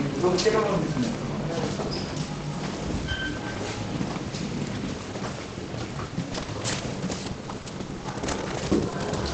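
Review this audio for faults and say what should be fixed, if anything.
From 6.33 s to 9.09 s there's a run of scattered short gaps: about fifteen tiny dropouts, none longer than around 20 ms, where packets arrived late or not at all. The receiver papered over each hole by stretching the preceding sound, so roughly 180 ms of missing audio turned into about 330 ms of concealed material. That shows up as little ticks, smears and hiccups across the last few seconds, on top of the call path's normal 8 kHz top end. A deeper jitter buffer or a steadier network link should keep those packets from going missing.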